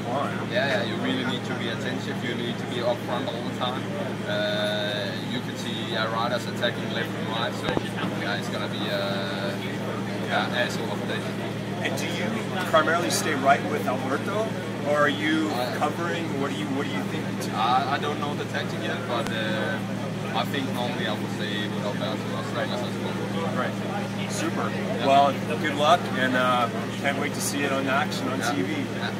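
A sharp double crack lands at 7.69 to 7.79 s, two pops in quick succession, and a single pop follows at 19.27 to 19.29 s. Each peaks about 20 dB above the surrounding sound, which carries on beneath them. This is a loud pop, likely from a sudden voltage step or pulse such as a plug, switch, static discharge or driver glitch, briefly shaped by the circuitry downstream.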